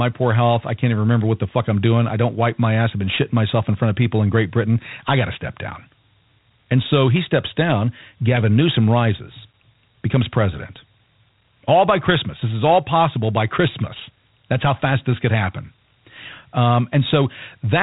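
Throughout, Dialogic VOX ADPCM coarsely quantises the speech, likely 4-bit at 32 kbps: gritty hiss tracks every syllable, and a spectrogram shows nothing above 3.8 kHz.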